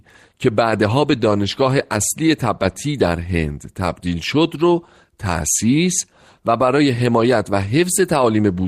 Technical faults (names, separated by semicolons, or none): none